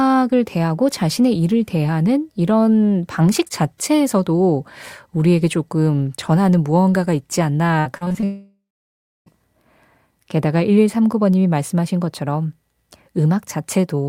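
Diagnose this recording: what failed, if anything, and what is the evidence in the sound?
Repeated packet loss (robotic sound), 7.79 to 8.24 s, at the network stage: six short holes, the longest 58 ms, are patched by repeating the last sound, which makes the audio choppy and robotic.

Long network dropout, 8.24 to 9.28 s: the last sound smears into a fading buzz, then about 0.64 s of silence follows. The likely cause is packets that never arrived.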